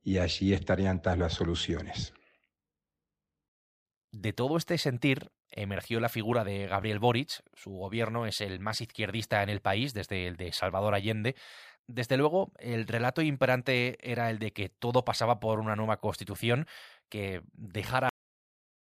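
The final stretch of audio was never written out or played back, so the recording has a cut-off end at 18.09 s. The last buffers of the speech simply never reached the output, which means the sound is stopped mid-utterance rather than finishing naturally. Instead of trailing away, it drops instantly to digital silence with no decay at all, and that dead silence holds for the remaining 0.8 s until the end.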